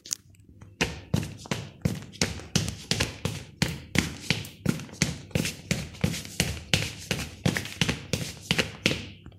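A recording of everyday sound, with no technical fault to be heard anywhere in it. There is no moment that needs a time or a cause.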